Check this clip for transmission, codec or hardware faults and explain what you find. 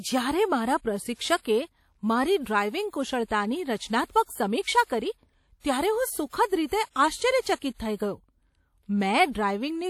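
One codec fault runs through the whole recording: damage from lossy transform coding, most likely WMA compression. The encoder works in long transform blocks and is short of bits, which fits a low bitrate around 48 kbps, so quantisation noise smears across tens of milliseconds and weak spectral detail is zeroed. On this speech the result is plainly audible: a ringing, washy texture with hiss that swells and fades with the signal, and no content above about 19 kHz.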